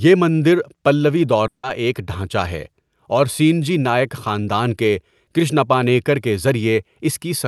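Long network dropout at 1.47 to 1.65 s: a brief fading buzz, then silence, likely from lost packets, so about 160 ms of speech never plays.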